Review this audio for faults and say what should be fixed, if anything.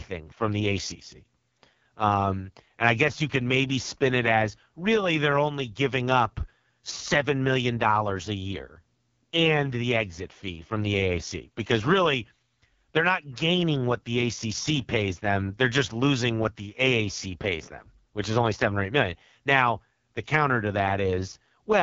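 The whole clip has been through the AMR wideband (HD Voice) codec, and the heavy rough, raspy texture points to its lowest 6.6 kbit/s mode. Nothing is left above about 7.1 kHz. Next time, keep the original recording or encode at 12.65 kbit/s or higher.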